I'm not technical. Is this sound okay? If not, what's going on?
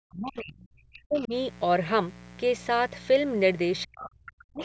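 No, there are problems here.

Mains buzz runs under the entire clip: a steady, raspy buzz at a fairly noticeable level. It comes from electrical interference tied to the 60 Hz power supply. Its gritty, edgy texture sets it apart from a smooth, low hum.

Speech suppressed in double talk shows up from 0.01 to 1.33 s and again from 3.84 to 4.61 s. The speech dips hard, thins out or drops away in pieces, for about a second and then about 0.7 seconds. The likely cause is the call's echo canceller turning everything down while both people talked at once. A network dropout wouldn't cluster around the other person speaking like this.

Other side's voice leaking through is heard from 1.16 to 1.27 s and from 3.95 to 4.08 s. Brief scraps of a second voice slip in, quieter than the main speech, and the second one is easier to notice. It is likely the far end's voice played on a loudspeaker and only partly removed. 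Unlike ordinary background chatter, it appears right where the main speech is being pushed down.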